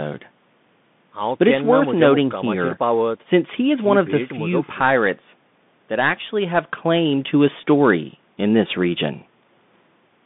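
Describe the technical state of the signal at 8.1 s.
At 8.1 s the speech carries Bluetooth CVSD headset codec damage, present across the whole clip. The one-bit delta coding at a rate that fits 64 kbps turns s sounds scratchy over a granular hiss. A spectrogram shows a flat ceiling near 3.6 kHz, little below 150 Hz, and a grainy noise floor.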